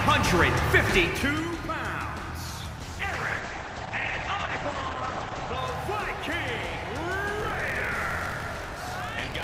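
From 2.79 s to 5.63 s the sound turns muffled and rough, with a watery, smeared texture. This is a call bitrate drop. The encoder's rate fell from 64 to 10 kbps and sat near the bottom for about 2.8 s, so detail was coded coarsely and the top end was cut from 20 kHz to 8 kHz.

From 7.38 s to the end a steady robotic buzz at 46.9 Hz rattles through the sound. This is buffer tearing. Writer and reader of the ring buffer have slipped, so about a fifth of each period replays audio roughly 40 ms old, with hard joins. The rate fits a 1024-sample buffer.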